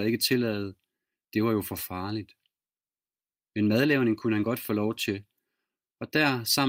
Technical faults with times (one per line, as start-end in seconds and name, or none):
none